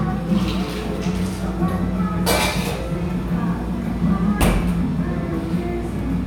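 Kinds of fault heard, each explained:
No kinds of fault are heard in these sounds.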